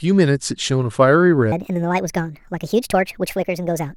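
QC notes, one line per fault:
1.52–3.96 s, section at the wrong speed: from here to the end the speech runs about 1.52 times too fast, so it turns rushed and chipmunky, roughly seven semitones up, since pitch rises with speed. Likely a playback or edit clocked at the wrong rate.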